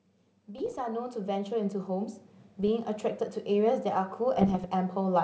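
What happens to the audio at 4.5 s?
Between 4.37 and 4.66 s the speech is hit by bit errors on an ADPCM link, at a rate of roughly half a percent, on a path whose clear band up to about 7 kHz fits G.722 at 64 kbit/s. Each flipped bit throws off the decoder's step size and predictor, so the error rings on for a few milliseconds. The result is a cluster of pops and rough, gritty bursts with brief jumps in level.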